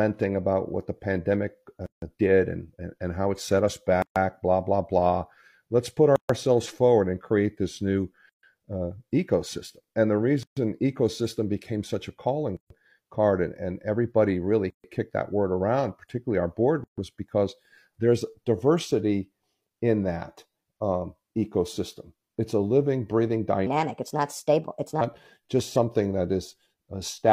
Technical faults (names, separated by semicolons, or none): gap at a join of encoded pieces; section at the wrong speed